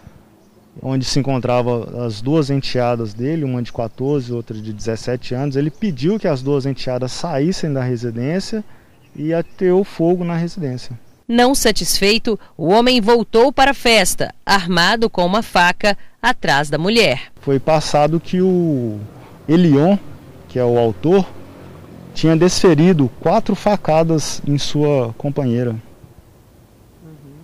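Hard clipping runs through the whole clip. The signal was driven about 10 dB past what a stage could pass. Roughly one to two percent of samples hit the ceiling and are cut flat. Those flat tops add high harmonics, heard as crackle on louder peaks.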